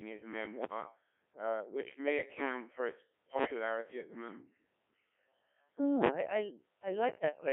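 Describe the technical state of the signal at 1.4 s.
At 1.4 s the speech is passing through the Codec 2 vocoder, which affects the whole clip rather than this moment alone. At 1.3 kbit/s only pitch, voicing, energy and a coarse spectral envelope get through, and the decoder rebuilds the voice from sine waves within a 250 Hz to 3.5 kHz band. The result is heavily robotic and buzzy. A waveform codec starved of bits would sound watery or smeared instead.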